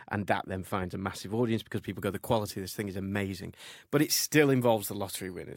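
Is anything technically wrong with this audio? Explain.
Yes. From 1.77 s to the end at 5.56 s, the speech has pre-emphasis left on: its treble was lifted for transmission and never cut back. Highs sit about 10 dB above 1 kHz at 10 kHz, a steady rise that fits a 50-microsecond FM curve rather than a flat shelf. The result is thin, bright and hissy on sibilants.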